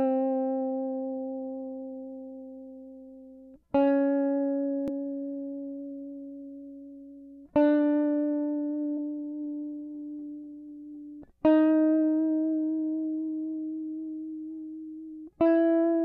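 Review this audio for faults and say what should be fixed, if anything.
Damaged data in a compressed stream causes brief glitches at 4.88 s and 8.97 s in the music. At each point, corrupted bytes leave the decoder unable to read a frame, so it loses sync and outputs a short glitch before locking onto the next valid frame header. To prevent it, verify file or stream integrity with checksums and re-transfer or re-encode from a clean source.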